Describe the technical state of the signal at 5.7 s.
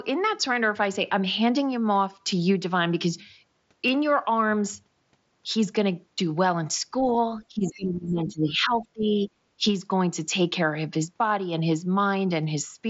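At 5.7 s the speech is intact, with no dropout, click or distortion, only the ordinary band limit of the mSBC Bluetooth headset path, which leaves nothing above about 7.7 kHz.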